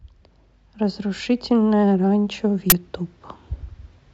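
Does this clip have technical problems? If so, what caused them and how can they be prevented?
Yes, there's one. At 2.70 to 2.72 s the speech is cut by a short, very loud burst of harsh digital noise. That's an uninitialised buffer: a 20 ms block was sent to playback before any audio had been written into it, so whatever was left in that memory got played as if it were samples. To prevent it, zero-fill buffers when you allocate them and only hand one to the output once it's been filled.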